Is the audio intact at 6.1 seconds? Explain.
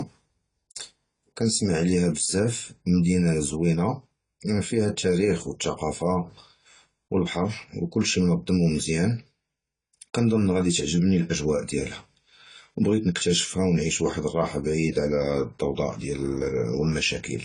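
No, at 6.1 seconds the speech sounds dull and smeared with fizzy sibilants and nothing above 10 kHz, likely AAC compression at a low bitrate near 24 kbps throughout.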